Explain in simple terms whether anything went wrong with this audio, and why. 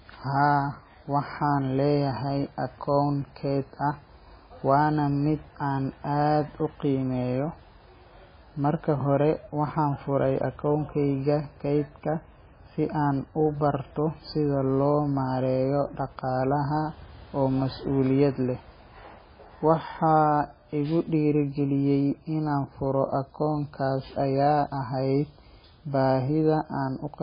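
MP3 compression damage runs through the whole recording: the speech sounds watery and dull, with nothing above about 5 kHz. The likely cause is an encoder short of data, which cut the treble and let faint details flicker in and out.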